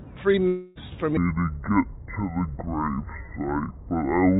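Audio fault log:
0.48–0.77 s, long network dropout: about 0.28 s of audio never arrives, and the receiver fills the hole by stretching the last sound into a fading buzz. The likely cause is lost packets.
1.17 s to end, section at the wrong speed: the audio plays at 0.56 times normal speed, sounding roughly ten semitones lower and slower. The likely cause is a wrong playback clock.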